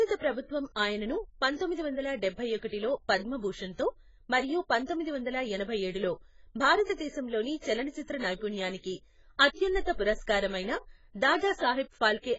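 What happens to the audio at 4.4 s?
AAC compression damage is audible at 4.4 s, as it is across the whole recording. The most likely cause is an AAC-LC encoder at a very low bitrate, the heavy smearing fitting something near 16 kbps. Starved of bits, the encoder discards the high band, so nothing reaches above 7.6 kHz, and quantises what remains coarsely. The speech therefore sounds dull and muffled, with a watery, warbling texture on held sounds and fizzy, smeared sibilants.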